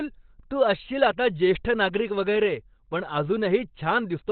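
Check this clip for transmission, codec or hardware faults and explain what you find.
One fault runs through the whole clip: Opus compression, likely in its SILK speech mode at a rate fitting roughly 12 kbps. To save bits it keeps only a narrow band, so nothing survives above 4.4 kHz, and the speech comes out muffled, hoarse and heavily roughened.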